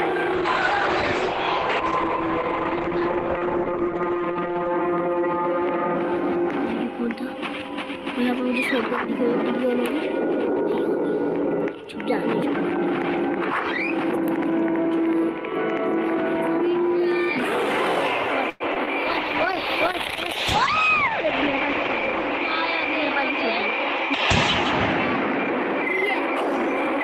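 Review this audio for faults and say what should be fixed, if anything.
A call bitrate drop runs from 0.35 to 4.85 s and again from 19.07 to 25.59 s. The encoder's rate fell from 64 to 10 kbps in the first event and to 11 kbps in the second. It stayed at its lowest for about 4.4 s and 3.1 s. Coarser coding makes the sound rough and watery. The top end is also cut off above 8 kHz, so it turns muffled. Smoother bandwidth estimation and a higher bitrate floor would prevent this.

A call audio freeze sits from 18.49 to 18.62 s. For about 0.11 s the last sound is stretched into a fading buzz or hiss, with no drop to silence. Then the audio resumes where it stopped. Nothing is lost, but a 108 ms gap is inserted and the timing shifts later by that amount. Packets were likely delayed in transit, leaving the jitter buffer empty. A deeper, adaptive jitter buffer would prevent this.

Short concealed packet loss follows at 18.74 to 18.77 s and at 18.86 to 18.89 s. 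Each time about 20 ms of audio never arrived. The receiver patched each hole with roughly 11 to 13 ms of continued sound, then blended back into the real signal. Each one is a brief smear or wobble right after the freeze. Forward error correction or redundancy on the call would prevent this.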